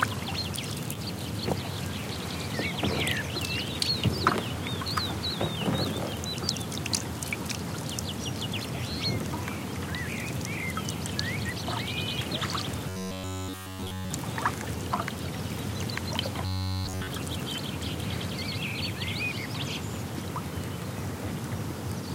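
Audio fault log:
12.89–14.11 s and 16.46–17.07 s, robotic sound from repeated short buffers: the audio turns into a rigid, metallic buzz pitched at 93.8 Hz, with nearly all of each stretch repeated. This is likely a roughly 10.7 ms buffer replayed in a loop while fresh audio failed to arrive.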